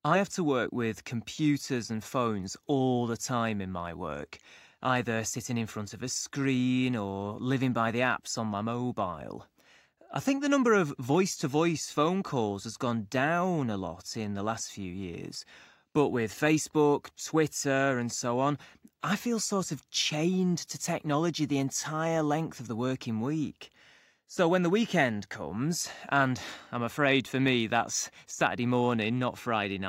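Nothing goes wrong anywhere in this recording, so there's no fault to point to at any moment.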